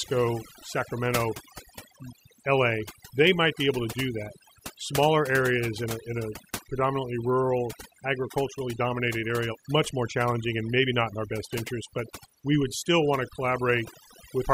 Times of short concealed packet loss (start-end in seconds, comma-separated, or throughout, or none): none